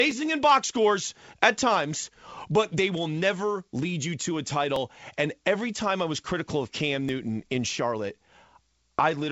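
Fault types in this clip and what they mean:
Clock drift buffer slips: A short click recurs every 2.33 s, about four times between 0.11 and 7.09 s. Each marks a small block of samples dropped or repeated. Likely cause: two device clocks disagreeing by a few hundred parts per million.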